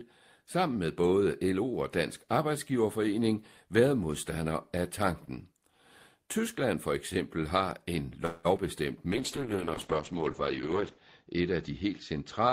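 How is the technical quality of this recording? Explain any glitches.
The recording has three call-transmission faults, all clustered in the second half of this speech clip.

Just after "for eksempel har en", from 8.25 to 8.47 s, the sound is stretched into a fading buzzy tail for about 190 ms before resuming exactly where it left off. This is a call audio freeze, likely caused by delayed packets draining the jitter buffer. Unlike packet loss, nothing is cut out. Instead, a pause is inserted and everything after it runs about 190 ms late.

At 8.57 to 8.59 s there is short concealed packet loss. About 20 ms of audio never arrived, and the receiver bridged it by extending the preceding sound, leaving a brief smear or wobble. Here the audio is actually missing rather than delayed, so the timing does not shift.

From 9.12 s to the end there is a call bitrate drop. The encoder rate falls from 32 to 8 kbps, with the lowest rate lasting about 1.9 s, and the audio bandwidth shrinks from 20 kHz to 8 kHz. 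The speech turns muffled and rough. Unlike the two brief glitches above, this is a sustained loss of clarity.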